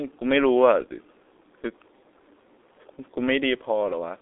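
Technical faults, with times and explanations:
Throughout, G.723.1 codec: the speech sits in a telephone band of 300 Hz to 3.7 kHz with nothing above 3.9 kHz, sounding muffled and hoarse with smeared consonants. Its 30 ms frames and slowly updated voice model, fitting roughly 6 kbit/s, damage it heavily.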